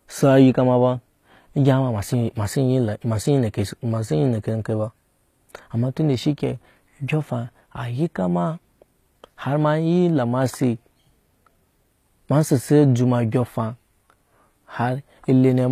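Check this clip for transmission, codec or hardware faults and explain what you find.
One codec fault runs through the whole speech clip. From start to end, the high band is synthetic: sibilants sound gritty and lisped, with a metallic sheen, and nothing is present above 14.9 kHz. The likely cause is HE-AAC compression, where only the lower spectrum is coded and the treble is rebuilt by copying lower bands upward under a coarse envelope. The plainly audible damage fits a low bitrate around 24 kbps.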